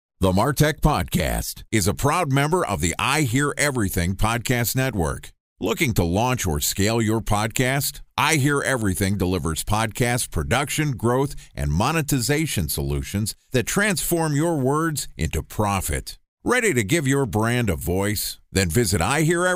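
Nothing technically wrong turns up anywhere in this speech recording, so there's no fault to point to here.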